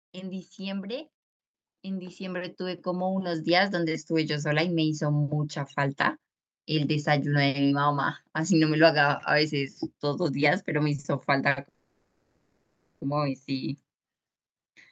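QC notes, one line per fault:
0.12–1.18 s and 1.82–4.44 s, automatic gain rising. The level climbs smoothly twice, by about 4 dB and then by about 10 dB. The gain control judged the input too quiet and turned itself up gradually. Speech and background noise swell together, because the gain acts on everything at once. The second rise is longer and larger. Over more than two seconds the background becomes louder.
10.95–11.00 s, 11.00–11.06 s and 11.49–11.58 s, short stall from a late packet. Three brief holds stretch the sound by 30 ms, 40 ms and 70 ms. Each time a packet had not arrived when due, so the jitter buffer ran dry. The receiver kept extending the last bit of sound until the packet came. Playback then resumed where it stopped, so nothing is lost. Each hold adds a slight hitch in timing.
11.68–13.03 s, call audio freeze. Playback hangs for about 1.3 s. The last sound continues and fades, ending in about 0.17 s of silence. 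The speech then picks up exactly where it left off, so a gap has been inserted rather than anything cut. The likely cause is packets held up in transit, which emptied the jitter buffer for the whole wait.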